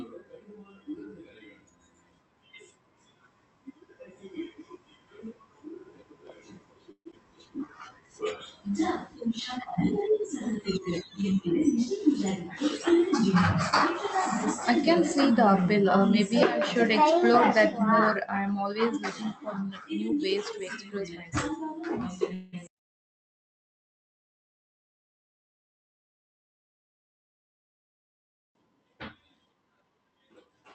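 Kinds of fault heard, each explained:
Long network dropout: At 6.91 to 7.14 s the speech breaks off, and the likely cause is a run of lost packets. The receiver fills about 207 ms by stretching the last sound into a fading buzz, ending in roughly 80 ms of near-silence. About 100 ms of the speech never returns. On a spectrogram the harmonics smear into blurred horizontal bands that fade to an empty column. The waveform shows a decaying repetitive envelope before the speech resumes mid-stream.
Jitter buffer slow-down: From 7.59 to 8.38 s, just after that dropout, the receiver rebuilds its reserve by repeating individual pitch periods. It inserts 112 ms in all, so this stretch plays at 87 percent speed. The pitch stays the same, but syllables drag. On a spectrogram the formant and harmonic patterns look horizontally stretched. The waveform shows near-identical cycles repeated back to back.
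Jitter buffer speed-up: The receiver trims surplus buffered audio by cutting out single or grouped pitch periods, about 150 ms in each passage. It happens twice here. From 20.09 to 21.60 s the speech runs at 110 percent, and from 29.45 to 30.49 s it runs at 115 percent. Both passages sound hurried while the pitch holds steady. On a spectrogram the features look horizontally compressed, with slightly abrupt joins. The waveform shows cycles that are spliced tightly together, with small discontinuities.
Call audio freeze: At 22.34 to 22.55 s the speech stalls, most likely because delayed packets left the jitter buffer empty. About 189 ms is filled by continuing the last sound as a buzz that never reaches silence, and the speech then resumes exactly where it stopped with nothing lost. This adds 189 ms of delay. A spectrogram shows a short block of flattened, repeated harmonics inserted into the speech. 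The waveform shows a looped, gently decaying segment.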